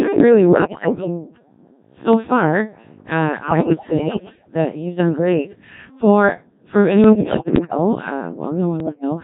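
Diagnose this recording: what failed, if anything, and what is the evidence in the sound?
The codec stage is at fault. From start to end the speech sounds robotic and buzzy, with heavy damage. That points to the Codec 2 vocoder at a very low rate, fitting 1.3 kbit/s. Only pitch, voicing, energy and envelope are sent. The decoder rebuilds speech from sine waves.

Bit errors on digital voice radio corrupt the radio link at 0.49 to 1.07 s, 3.48 to 4.54 s, 7.04 to 7.77 s and 8.80 to 9.04 s. Pitch, level and tone jump into warbles and gibberish. Roughly 7 to 15 percent of bits are flipped, scrambling each frame's parameters.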